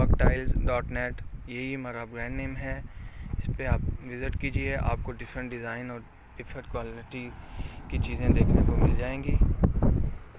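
No technical faults are audible anywhere in the audio, so there is nothing to log.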